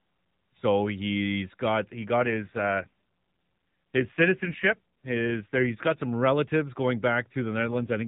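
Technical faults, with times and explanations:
2.20–5.99 s and 7.58 s to the end, AMR rate drop: the light coding of the AMR narrowband mobile codec gives way twice to a rougher, buzzier, more synthetic speech quality, which fits the network stepping the codec down from about 12.2 to 5.9 kbps on a weak radio link. Fewer bits describe the pulses driving the vocal-tract model, so detail thins, while the bandwidth stays the same and no gap appears. The first drop recovers at 5.99 s. The second lasts to the end.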